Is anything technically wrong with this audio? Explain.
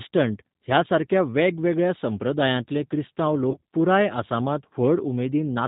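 Yes. Two faults are present.

Throughout, the speech carries G.729 codec damage, plainly audible as a slightly rough, synthetic texture with nothing above 4 kHz. The decoder rebuilds each 10 ms frame from a vocal tract filter, a pitch predictor and a handful of pulses, which fits an 8 kbit/s G.729A stream. Unlike a simple low-pass or narrowband telephone line, the harshness sits inside the voice itself, a rough, synthetic quality rather than mere dullness.

From 3.51 to 3.61 s, between "सारक्या वेगवेगळ्या संप्रदायांतले क्रिस्तांव" and "पुराय आसामांत", VoIP packet loss concealed by the speech codec breaks the flow. About 50 ms of audio went missing, scattered across 100 ms, with the longest gap 30 ms, which points to five lost frames. The decoder extends its last pitch and filter at falling gain, so the speech smears into a brief buzzy tone or coloured noise that fades and stays weak or distorted as it recovers, rather than the clean silence or click of a raw dropout.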